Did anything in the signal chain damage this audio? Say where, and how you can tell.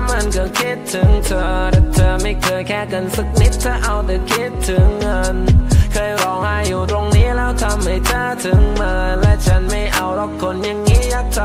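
No, nothing along the chain seems to have harmed this one, and there's nothing here that calls for a closer look.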